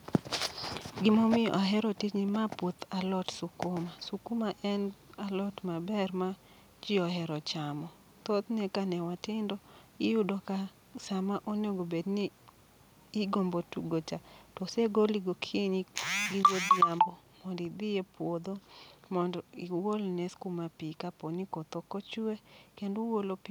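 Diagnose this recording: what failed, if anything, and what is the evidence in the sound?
Microphone overload at the converter stage: from 16.44 to 16.83 s the loudest peaks turn harsh and crackly, likely because the input drove about 4 dB past full scale. On the waveform, under one percent of samples sit flattened. On the spectrogram, broadband smearing rises above the harmonics.

Microphone volume stepped down, in call processing: at 16.46 s the speech and background fall together by 3 dB in one step, likely the call software cutting the device's input gain in response to the clipped peaks. The waveform envelope drops abruptly there, and the spectrogram darkens evenly across all frequencies.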